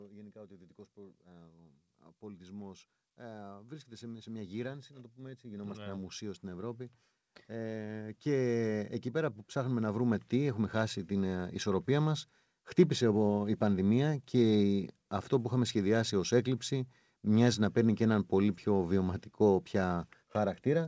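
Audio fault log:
2.2–12.3 s, automatic gain rising: the gain control judged the input too quiet and raised its gain by about 20 dB over roughly ten seconds, so speech and background noise swell together until just before "χτύπησε η πανδημία", with nothing above 8 kHz through the call path.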